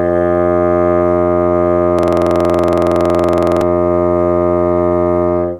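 A music clip with a system hang loop from 1.99 to 3.62 s. One 46.44 ms slice repeats exactly 35 times at 21.5 Hz, which fits a 2048-sample buffer. It is a rigid, machine-gun stutter rather than a silent dropout or a varying glitch.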